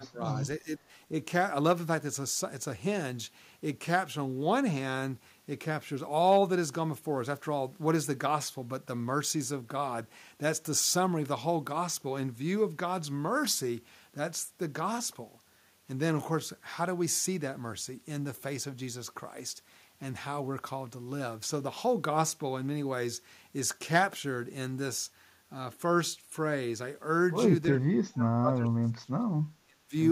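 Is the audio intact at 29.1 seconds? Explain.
No. From 27.7 to 29.26 s the speech dips very deeply, speech suppressed in double talk, likely from an echo canceller turning down the local talker along with the loudspeaker echo when both sides talk at once.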